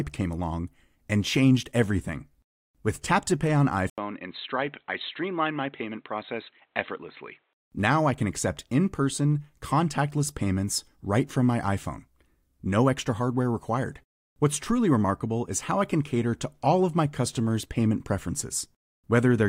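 From 3.90 to 7.61 s, after an 80 ms gap, speech stops above 4.1 kHz and gains its own noise: likely an input switched to a poorer device.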